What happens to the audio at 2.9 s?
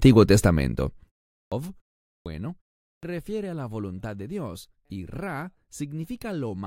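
The output device dozed off during the 0.35 s pause before 2.88 s and took about 150 ms to wake, giving a clipped start after a pause from 2.88 to 3.03 s: the speech resumes abruptly out of silence, its opening sounds swallowed.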